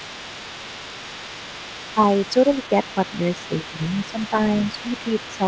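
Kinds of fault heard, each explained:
Other side's voice leaking through: A second voice runs faintly under the talker for the whole clip, roughly 20 dB below the main speech. The likely cause is the far end playing on a loudspeaker near the microphone, with the echo canceller leaving part of that playback behind. It is limited to the same band below 8 kHz as the rest of the call audio.
Speech suppressed in double talk: The talker's level briefly dips at 1.94 to 2.0 s, 3.49 to 3.8 s, 4.12 to 4.34 s and 5.38 to 5.43 s, by around 10 dB at most and only about 5 dB in the third dip. Each lasts a short fraction of a second. These are likely moments when both sides spoke together and the echo canceller, unable to separate near speech from echo, pulled the whole signal down.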